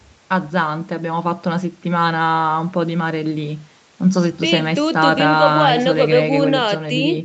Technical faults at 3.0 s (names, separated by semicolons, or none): none